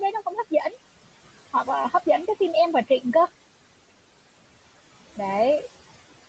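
From start to finish, the background noise drops away in the pauses and creeps back up under the speech. These are noise suppressor artifacts: the suppressor pulls down, frame by frame, the bands it judges to be steady noise, cutting it by about 17 dB here, against room noise sitting about 19 dB below the speech in audio that stops at 8 kHz.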